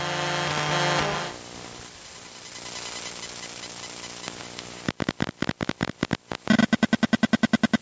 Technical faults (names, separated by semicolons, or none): gain pumping